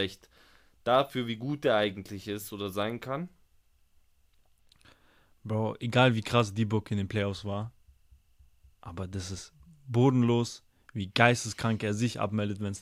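Nothing stood out on listening to this speech recording.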